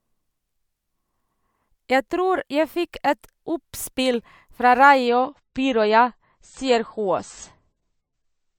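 A speech clip in which an adaptive stream switches to a lower bitrate at 5.07 s and stays there to the end. The treble suddenly thins and turns swirly with no gap, consistent with a fall from roughly 128 to 31 kbit/s MP3. On a spectrogram, everything above 8.3 kHz vanishes at that instant, while the waveform stays continuous.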